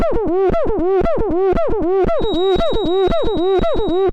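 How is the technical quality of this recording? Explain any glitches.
The technical quality is poor, with two faults: clipping across the whole recording and a whistle in its second half.

Hard clipping runs from start to finish. The signal reaches some stage about 7 dB hotter than it can pass, so its peaks are sliced flat, affecting a small share of samples. On a waveform the loudest excursions show as squared-off plateaus. The flattening creates extra harmonics, which a spectrogram shows as vertical smears reaching high up on each loud moment. To the ear, the peaks carry a crackly, gritty edge.

A feedback whistle begins at 2.13 s and lasts to the end. It is a steady 3.8 kHz tone sitting well below the main signal, most likely caused by a loudspeaker-to-microphone loop held just short of runaway, so that one frequency keeps ringing without growing. A spectrogram shows it as a thin horizontal line at 3.8 kHz, uneven in brightness. 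It is heard as a faint, thin whistle behind the sound, slowly swelling and fading in level.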